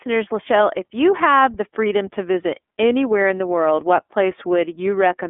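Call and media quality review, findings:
iLBC codec throughout, likely 30 ms frame mode, fits 13.33 kbps: band held to roughly 250 Hz–3.5 kHz, nothing above 3.7 kHz; independently coded frames leave plainly audible rough, synthetic texture.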